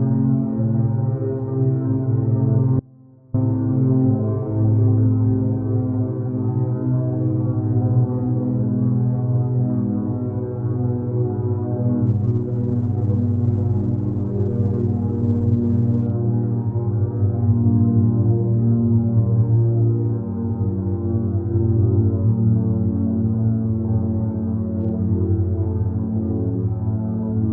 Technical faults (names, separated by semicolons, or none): audio dropout to a faint residue; adaptive stream at a lower bitrate